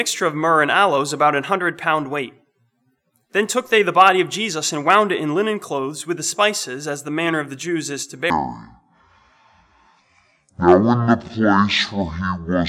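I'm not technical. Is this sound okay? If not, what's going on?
No. From 8.3 s to the end, there's a section at the wrong speed. It plays at about half speed, so everything turns slow and much deeper at the same moment, likely from a wrong playback clock. A plain pitch change would deepen the sound without slowing it down.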